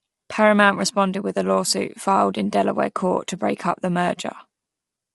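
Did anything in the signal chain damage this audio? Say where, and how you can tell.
Yes, at the codec. The speech is grainy throughout, with nothing above 11.6 kHz. This is likely low-delay AAC compression, whose low 32 kbps bitrate leaves noise between the harmonics.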